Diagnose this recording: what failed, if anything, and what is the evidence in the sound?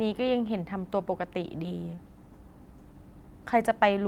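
A network packet loss left roughly 20 ms of speech missing; the decoder's concealment extended the preceding sound, leaving a brief smeared wobble from 1.95 to 1.99 s.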